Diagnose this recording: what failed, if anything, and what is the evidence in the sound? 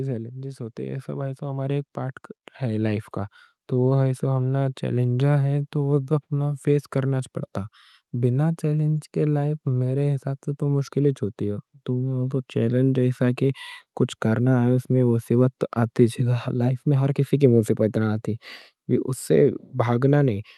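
The automatic gain control in the call processing judged the incoming speech too quiet and raised its gain gradually, a case of automatic gain rising. From 0.76 s to 3.13 s the level climbs by about 8 dB, and the speech and the background noise floor swell together rather than the speech alone getting louder. That shared, gradual rise over more than two seconds is the signature of a gain stage adjusting, not of the talker changing effort. The Opus call path is also audible in the band-limiting near 12 kHz.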